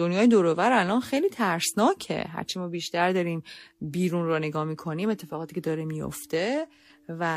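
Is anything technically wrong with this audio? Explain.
No, nothing is technically wrong with this audio.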